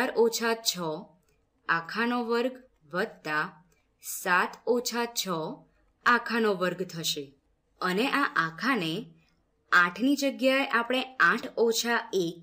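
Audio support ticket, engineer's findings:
No faults found on a full listen; nothing here points to a problem in capture, processing or playback, so the ticket can be closed from the audio side.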